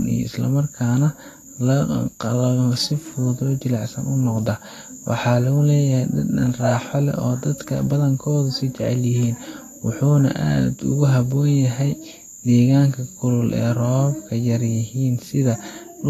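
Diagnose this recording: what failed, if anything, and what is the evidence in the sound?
The damage sits at the codec stage, most likely Vorbis compression at a low bitrate, somewhere near 30 kbps. Across the whole clip the speech sounds hissy and grainy, with nothing above 14.2 kHz. Treble detail has been quantised so coarsely it turns into noise, softening consonant attacks.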